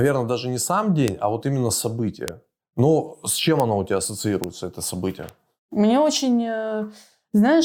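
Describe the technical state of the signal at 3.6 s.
A bit error spike sits at 3.60 s, just after "с чем" and before "оно у тебя". One flipped bit in a single sample throws its value off by a power of two before it snaps back. The result is one sharp, broadband tick that has nothing to do with the speech around it.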